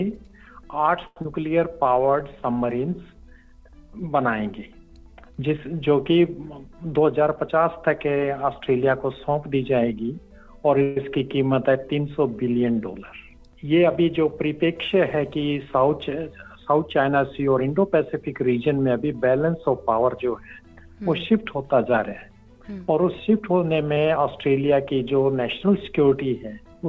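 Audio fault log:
1.07 to 1.17 s, short stall from a late packet: one sound is held about 94 ms too long with a slight buzz or dip, because the receiver stretched it while waiting for the packet. Nothing is lost. On the waveform, a stretch of repeated identical cycles; on the spectrogram, flat, smeared harmonics.
1.22 to 1.26 s, skip ahead: playback jumps forward, dropping roughly 70 ms while the jitter buffer sheds its extra delay. A 24 ms bridge joins the two sides almost directly. The spectrogram shows an abrupt discontinuity in the harmonic tracks; the waveform shows a slightly mismatched splice.
1.68 to 2.13 s, jitter buffer slow-down: the sound runs at 89% speed at unchanged pitch, about 57 ms longer, because repeated pitch periods were inserted to rebuild the buffer's reserve. Spectrogram features look horizontally stretched at constant frequency, and the waveform shows duplicated periods.
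6.84 to 8.06 s and 14.06 to 18.24 s, jitter buffer speed-up: the sound runs faster, at 107% and then 103% at the same pitch, trimming roughly 100 ms and 150 ms, as short pitch-period pieces were cut to reduce excess delay. The spectrogram looks compressed in time with no frequency shift, and the waveform shows small, frequent splices. All of this sits within a band that ends at 8 kHz, which fits a G.722 wideband call path.
10.83 to 10.97 s, call audio freeze: the sound halts for about 137 ms and is bridged by a continuation of the last sound as a decaying buzz or hiss, never reaching silence. It then resumes from the same point, likely because packets were delayed in transit. On the spectrogram, the frozen harmonics fade out; on the waveform, a tapering sustained stretch.
23.94 s, short concealed packet loss: 20 ms never arrived, and the receiver extrapolated the preceding sound before crossfading back, giving a brief smear or wobble. 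The spectrogram shows a tiny blurred patch; the waveform shows a short concealed section with a soft join.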